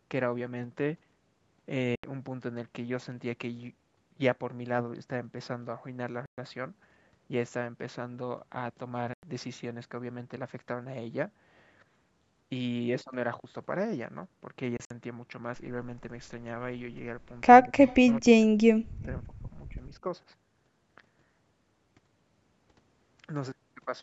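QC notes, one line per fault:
1.95–2.04 s, 6.26–6.38 s, 9.14–9.23 s, 14.77–14.91 s, Bluetooth dropout: the speech drops to silence for 80, 120, 93 and 80 ms. The last gap is broken into pieces across 133 ms, with the longest run 53 ms. Each time the speech resumes further along, as if it had kept playing, which points to wireless packets likely arriving too late at the headphones and being discarded.
17.65–17.77 s, speech suppressed in double talk: the speech briefly dips by about 15 dB for roughly a tenth of a second. This fits an echo canceller that likely mistook the talker for loudspeaker echo while both sides spoke and turned the signal down.
17.87–18.14 s, echo leak: a faint copy of the speech trails the original by 217 ms, about 25 dB below it. This is likely loudspeaker sound that the far end's microphone caught and its echo canceller failed to remove fully, so it was sent back down the line.
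18.21–20.05 s, speech suppressed in double talk: a deeper and longer suppression, up to about 40 dB, affects about a second of the speech. Overlapping talk likely pushed the echo canceller into attenuating the near talker along with the echo.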